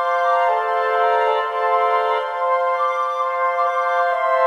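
From start to end the sound runs with a doubled audio track: an equally loud, full-band copy trails by roughly 0.7 s, likely from a second, slower capture path. Unlike an echo or reverb, the copy never decays and carries no room colour.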